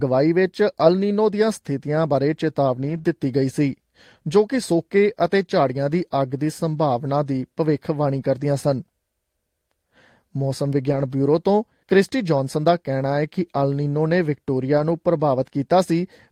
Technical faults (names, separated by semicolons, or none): lost packet rebuilt from error correction; short concealed packet loss